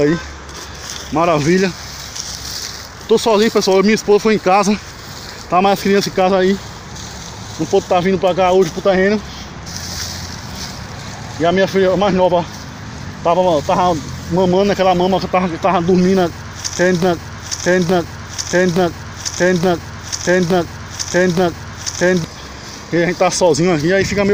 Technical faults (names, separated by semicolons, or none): broken-record loop